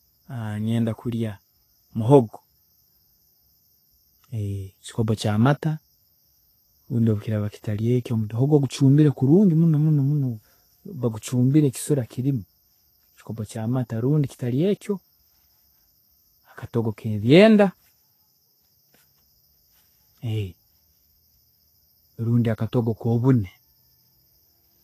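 Throughout the speech, nothing reaches above 14.2 kHz. The treble sounds hissy and grainy. This is likely Vorbis compression at a low bitrate, near 31 kbps.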